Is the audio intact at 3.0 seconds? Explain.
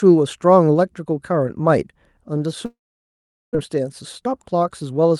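No. At 3.0 seconds the audio sits inside a long network dropout running from 2.65 to 3.57 s, most likely a stretch where no packets arrived. The receiver briefly extends the last sound as a fading buzz, then goes silent for about 780 ms, and about 600 ms of material never returns. On a spectrogram this shows as a short smeared band dissolving into an empty gap. The waveform flattens to near zero before the sound resumes.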